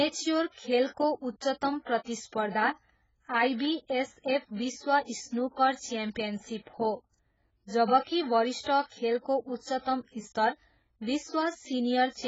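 Speech runs dull and smeared from start to finish, with nothing above 7.6 kHz and a warbling, fizzy texture on sustained sounds and sibilants. The likely cause is heavy AAC compression, with AAC-LC holing out and band-limiting the spectrum in a way that fits a very low bitrate near 12 kbps.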